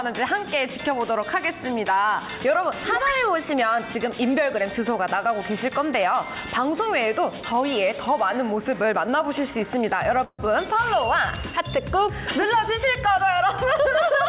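At 10.24 s the audio stalls until 10.41 s: a call audio freeze. The last sound stretches into a fading buzz, then about 50 ms of silence. Packets were likely delayed, draining the jitter buffer. Playback resumes where it stopped, nothing lost, 146 ms late.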